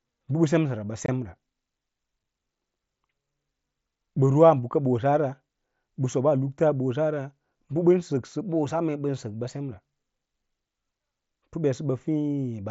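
Speech carried over a wideband mSBC Bluetooth headset link, with unconcealed Bluetooth headset packet loss. The audio drops out abruptly from 1.06 to 1.09 s, a hole of about 22.5 ms consistent with three consecutive 7.5 ms packets, and again at 2.23 s for one 7.5 ms packet. Silence or an idle pattern replaces the missing audio, leaving hard-edged gaps, against light mSBC graininess.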